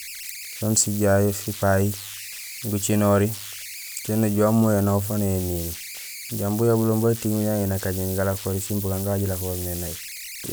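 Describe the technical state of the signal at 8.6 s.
At 8.6 s, as across the whole clip, converter idle tones from an undithered delta-sigma converter whistle around 2 kHz, about 13 dB below the speech, showing as a thin horizontal spectrogram line.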